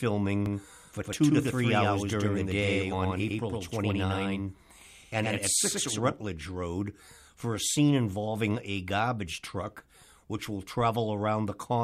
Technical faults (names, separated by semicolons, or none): doubled audio track